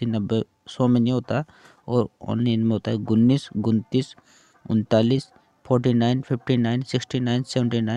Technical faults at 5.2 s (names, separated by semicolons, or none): corrupt frame decoded